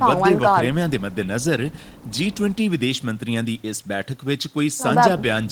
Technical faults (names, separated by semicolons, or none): none